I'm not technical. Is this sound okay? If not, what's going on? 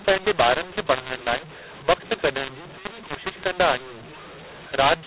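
No. The whole clip has mu-law and A-law mixed up: telephone speech saved in one coding style is played back using the other, so the levels get scrambled, making it harsh and filling pauses with noise.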